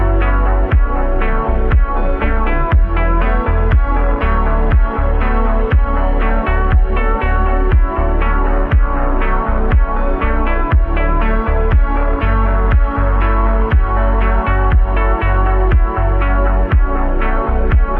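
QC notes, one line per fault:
No faults heard; nothing to flag.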